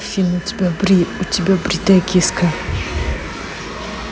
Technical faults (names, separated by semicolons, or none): USB whine